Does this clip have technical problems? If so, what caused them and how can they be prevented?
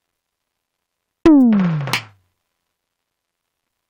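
No, no technical faults here.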